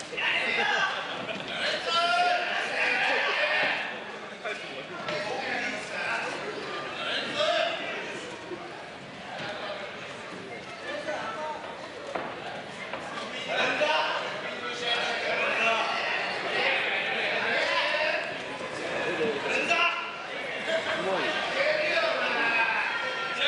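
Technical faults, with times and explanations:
Nothing stood out on listening; no technical problem could be heard anywhere in the recording.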